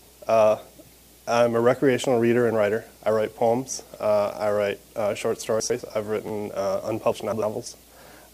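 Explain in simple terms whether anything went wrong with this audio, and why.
Chunks out of order occur twice: around 5.6 to 5.8 s, and 7.12 to 7.42 s. Short pieces, about 100 ms each, arrived late and played in the wrong order, causing jumbled moments.

A repeated buffer occurs at 6.28 to 6.30 s. An 11.6 ms piece, which fits a 512-sample buffer, played two extra times while new audio was late, producing a brief buzzy click.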